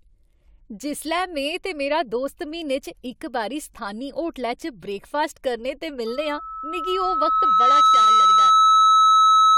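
Loudspeaker feedback squeal takes over this speech clip from 6.06 s, just after "ब्रेकफास्ट करने ते", and runs to the end at 9.58 s. A microphone is picking up the loudspeaker it drives, and at 1.3 kHz the loop gain has passed one, so that tone feeds on itself. It swells over roughly two seconds into a steady squeal sitting about 15 dB above the speech, and nothing breaks the loop before the clip ends.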